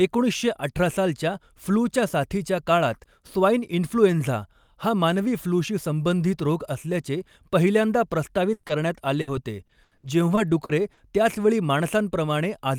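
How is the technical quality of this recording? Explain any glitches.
The recording suffers from network packet loss: two short bursts, one brief concealed dropout, and a choppy stretch near the end.

Bursts of packet loss, at 8.53–8.65 s and 9.21–9.29 s: about 100 ms and 60 ms of audio never arrived. The receiver extended the last sound and faded it, then skipped ahead. On a spectrogram this shows as frozen, smeared bands; on a waveform, a decaying envelope followed by an abrupt restart.

Short concealed packet loss, at 8.67–8.71 s: about 20 ms went missing just after the first burst. It was patched by continuing the preceding sound and crossfading back, giving a brief smear or wobble. It appears as a thin vertical blur on a spectrogram and a slight kink in the waveform.

Repeated packet loss (robotic sound), from 9.67 to 10.99 s: six gaps, the longest 80 ms, with about 260 ms (roughly a fifth of the stretch) concealed. 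Each gap is patched from the last sound, producing choppy audio with pieces missing. A spectrogram shows recurring stretched patches; the waveform shows repeated stutters.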